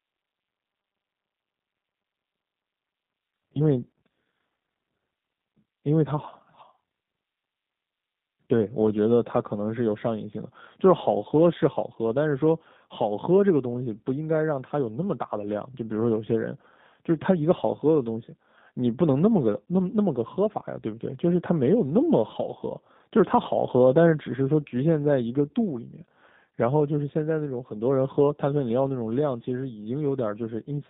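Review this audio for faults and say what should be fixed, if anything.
The speech ran through a G.729 codec for the whole clip, which fits an 8 kbit/s link. The codec rebuilds each 10 ms frame from a vocal tract filter, a pitch predictor and a few pulses. The band is held between 150 Hz and 3.7 kHz, and the voice has a plainly audible rough, synthetic edge. To prevent this, record locally or use a wideband codec at a higher bitrate.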